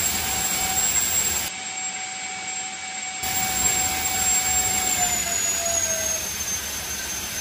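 From 1.48 s to 3.23 s the sound turns dull and boxy, with nothing above 8.7 kHz. It drops roughly 10 dB in level and gains faint new background noise. There is no gap at either change. The likely cause is an input switched to a poorer device.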